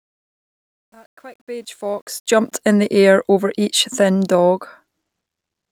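From 0.0 to 2.52 s, the fade-in of this speech clip shows truncation distortion: the gain stage discards low bits without dither, which fits roughly 10-bit resolution. Until 1.68 s the faint signal turns gritty and square-stepped, clearing before "in the air over".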